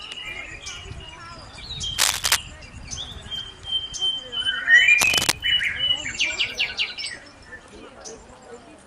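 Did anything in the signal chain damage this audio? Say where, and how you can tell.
Yes. Cable scratch noise in the analogue wiring, likely a worn contact whose resistance flickered, laid rough bursts about 5 dB above the sound at 1.98–2.37 s and 5.00–5.32 s.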